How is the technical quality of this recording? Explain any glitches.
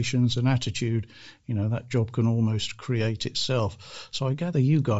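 Technical quality is limited. Two problems are audible: a coded, grainy texture throughout, and one brief dropout.

Bluetooth LC3 compression affects the whole clip, and the damage is plainly audible. The upper frequencies sound thin and hissy instead of detailed. The speech carries a breathy, grainy edge. The likely cause is the LC3 codec running at a low bitrate, around 32 kbps, with 10 ms frames. At that rate the encoder discards much of the top of the spectrum and fills the gaps with noise.

Lost LE Audio frames cause a short glitch from 3.88 to 3.90 s. It lasts about 20 ms, which fits two lost 10 ms frames. With no new data arriving, the decoder repeated the last spectrum with randomised signs. A loss this short does not fade toward silence. The result is a quick noisy smear that briefly replaces the speech.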